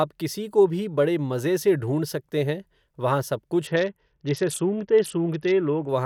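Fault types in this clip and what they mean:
Bluetooth SBC bit pool drop: From about 3.67 s to 5.89 s, just after "सकते हैं वहां सब", the speech turns dull and gritty, which fits the encoder cutting its bit budget sharply, roughly to a bit pool near 7 and about 66 kbps. The upper sub-bands go starved or empty and the rest are coarsely quantised. A spectrogram shows the treble thinning or vanishing with grainy noise filling the lower bands until quality returns.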